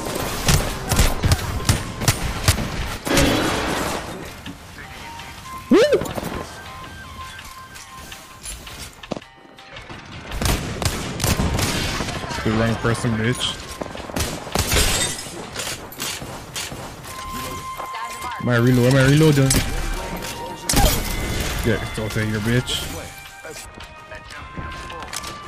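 At 2.52 s and again at 16.55 s, there is a CD skip. The laser jumps to another turn of the spiral. Each time, playback mutes for just a few milliseconds, giving a tick. The sound then resumes from a different point.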